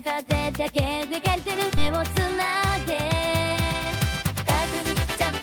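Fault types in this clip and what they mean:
Skip ahead: At 1.77 s about a second of sound is missing. Playback jumps straight forward with no gap, joining the two sides almost directly.
Jitter buffer speed-up: From 3.82 to 4.00 s the buffer trims short pitch-period pieces, roughly a few tens of milliseconds. Sound runs at 119% speed, same pitch, hurried.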